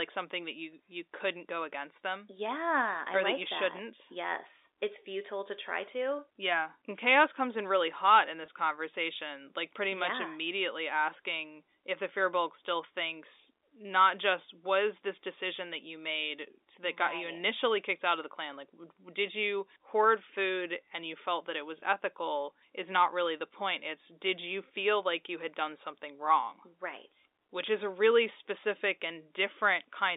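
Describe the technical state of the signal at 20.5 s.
At 20.5 s the audio is intact, carrying speech through what sounds like a telephone line band, roughly 300 Hz to 3.7 kHz, with no fault at that point.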